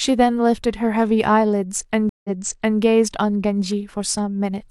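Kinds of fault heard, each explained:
Stream reconnect: the connection dropped and a new decoder restarted mid-stream, so around 2.09 s the sound cuts to roughly 150 ms of silence, a flat gap in the waveform and a blank column on a spectrogram, then resumes about 0.56 s earlier, repeating material already heard.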